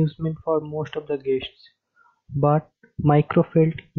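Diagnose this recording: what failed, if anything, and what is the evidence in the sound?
Nothing failed; no audible fault anywhere in this recording.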